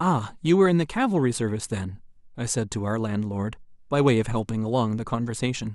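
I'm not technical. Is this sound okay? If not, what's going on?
Yes, nothing wrong can be heard in this recording.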